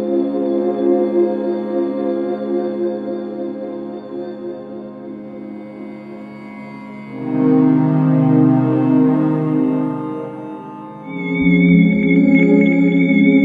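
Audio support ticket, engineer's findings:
No faults found on listening.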